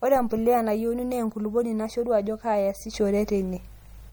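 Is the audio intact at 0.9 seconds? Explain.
No, the speech at 0.9 seconds carries the same swirly, watery texture heard throughout, likely MP3 compression, whose starved encoder drops weak frequency lines, fitting roughly 64 kbps.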